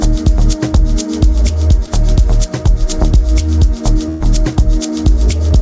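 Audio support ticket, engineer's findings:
Brief smear at 1.86–1.89 s, about 20 ms of audio lost. Short concealed packet loss: receiver extended the preceding sound, then blended back into real audio.

Held, fading continuation at 4.09–4.34 s, then audio resumes further on. Burst of packet loss: about 100 ms missing, concealment synthesised about 110 ms while decaying.

Both through the WebRTC call path, G.722 band-limited to 8 kHz.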